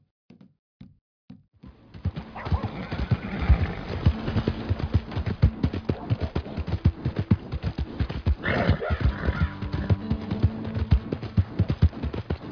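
There are no technical faults to describe at any point in the clip.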